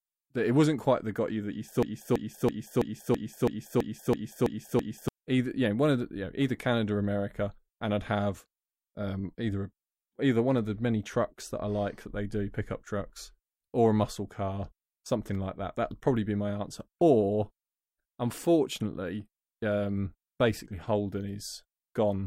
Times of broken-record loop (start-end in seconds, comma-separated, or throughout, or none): 1.83-5.08